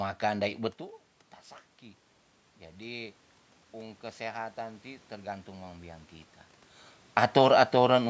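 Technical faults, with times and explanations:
3.73 to 6.11 s, automatic gain rising: the input dropped by about 15 dB, so the gain control slowly climbed about 6 dB, swelling voice and room noise together.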